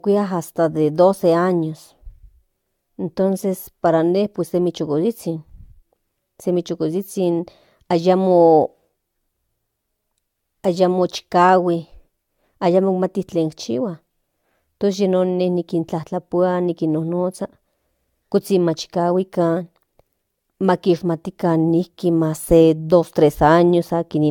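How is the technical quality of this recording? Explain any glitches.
The recording's quality is degraded throughout by a single fault. Generation loss runs the full length. The speech sounds swirly, smeared and hollow, and consonant attacks blur. This is likely from around four successive AAC-LC encodes, which fits a 96 kbit/s chain, with each pass re-quantising on a shifted frame grid. A spectrogram shows nothing above 17 kHz.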